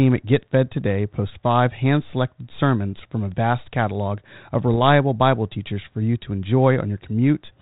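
Bit errors on an ADPCM link strike at 0.68 to 0.72 s and at 4.74 s, after "a vast catalog of". Sparse flipped bits knock the decoder's step size and predictor off track, causing brief pops with rough, jumpy-level bursts.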